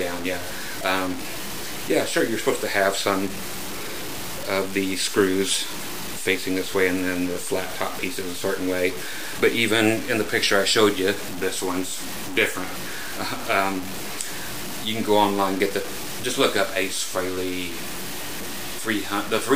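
From start to finish a grainy distortion rides on the sound, roughly 10 dB below the signal. The likely cause is low bit depth without dither, with truncation to what sounds like about 5 bits. The error moves with the signal, unlike the steady, independent hiss that dither leaves.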